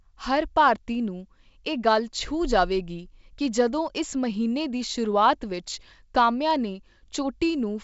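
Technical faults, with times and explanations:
No technical faults are audible; the speech has the band-limited character of G.722 wideband telephone coding, with nothing above 7.7 kHz and at most faint coding effects, which fits the full 64 kbit/s mode.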